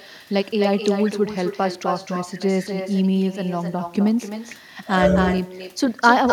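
From start to finish there's echo with no canceller. Every bit of speech comes back roughly a third of a second later as a fainter copy, about 9 dB down, sounding thinner than the original. The far end is playing the call through a loudspeaker, their microphone catches it, and nothing strips it out before it's sent back, so the talker ends up shadowed by their own delayed voice the whole way through.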